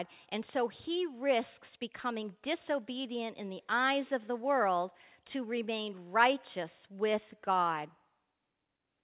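Nothing stood out on listening to this speech, which carries the narrow, telephone-like band of a G.711 call path with nothing above 4 kHz.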